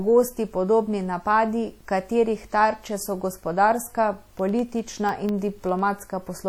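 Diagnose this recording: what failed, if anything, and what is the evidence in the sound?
Sample-format conversion: the whole clip has a gritty, grainy distortion that rides on the speech and sits about 40 dB below it, getting rougher on the quiet tails. That's likely truncation to a short word length without dither, which fits about 9 bits, so the rounding error tracks the signal.

Codec stage: across the clip the speech sounds washy and ringing, with a hiss that swells and fades along with the talking. It's plainly audible and sounds like WMA compression at a low bitrate, around 48 kbps, smearing quantisation noise over long transform blocks.

Driver or buffer stage: from 4.19 to 5.99 s, right after "katerih tarče so gospodarska", there's a steady tick every 0.1 s, around twenty in all. Each is a tiny slice of audio replaced by silence, the classic pattern of periodic USB or driver dropouts from something stalling the bus.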